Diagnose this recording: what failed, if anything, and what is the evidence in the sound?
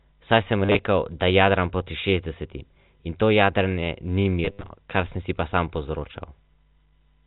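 The network failed: packet loss with last packet repeated, in two bursts. From 0.65 to 0.79 s about 90 ms of audio is missing across a 140 ms stretch (longest gap 40 ms). From 4.45 to 4.69 s about 140 ms is missing across 240 ms (longest gap 70 ms). The receiver replays the last good packet to fill each gap, so the speech stutters robotically. The buzz during the longer runs fits 10 ms packets (around 100 Hz). The G.711 telephone band, capped at 4 kHz, is audible throughout.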